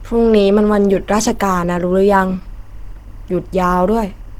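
From start to end, timecode bleed leaks in roughly 40 dB below the speech: a faint chirping warble switching between about 1 and 2 kHz at a 23.976 fps code rate. Throughout, the speech is plainly muffled and hoarse, likely from Opus compression in hybrid mode at a low bitrate, consistent with around 16 kbps.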